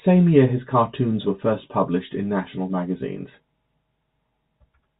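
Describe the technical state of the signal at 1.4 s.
At 1.4 s the speech is intact, with no fault present.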